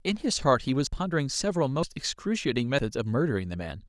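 At 0.87, 1.83 and 2.79 s the speech skips abruptly, likely audio missing between chunks, roughly 40 ms lost every second, showing as hard waveform splices.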